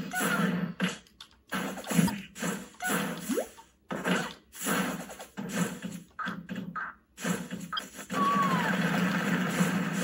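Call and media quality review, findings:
Damaged data in a compressed stream at 2.05–2.10 s and 7.75–7.79 s: two short corrupted bursts of roughly 45 ms each. The decoder misreads bad frames, loses sync and hunts for the next valid frame header. Probable component: transport or storage of the encoded stream.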